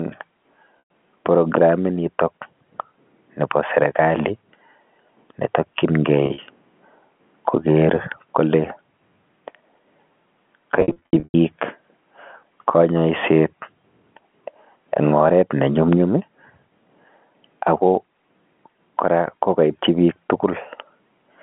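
Packet loss with pitch repetition breaks up this telephone-band speech three times: at 0.79 s, one 110 ms gap; at 6.26 to 6.38 s, short drops of up to 40 ms; and at 10.76 to 11.34 s, repeated losses with runs up to 100 ms. Each time the receiver fills the hole by looping the last pitch period. The brief gaps sound like a held, buzzy note. The longer runs fade toward silence before the speech cross-fades back.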